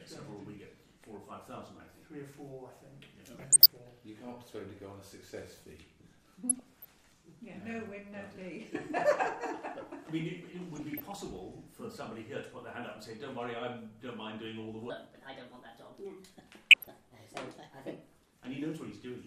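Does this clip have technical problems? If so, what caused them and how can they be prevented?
Yes. DAB burbling, short blips of noise in single sub-bands, appears at 3.37–3.68, 6.49–6.89, 10.67–11.14 and 16.71–16.88 s. Weak reception let bit errors corrupt MP2 sub-band data. Stronger signal or better antenna placement prevents it.

A section at the wrong speed, 14.90–18.36 s, sounds hurried and about four semitones high, playing 1.28 times fast, likely from a clock or sample-rate mismatch. Matching playback and editing rates prevents it.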